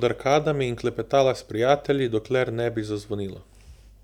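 A block size mismatch (truncated) runs throughout the speech, from start to finish. One stage hands over blocks longer than the next stage takes in, so the tail of every block is discarded. Each cut leaves a small discontinuity, and these repeat at 43.1 Hz to form a steady low buzz under the speech. That rate fits 1024-sample blocks. So little is lost per block that the speed holds at 1.0x, with normal pitch.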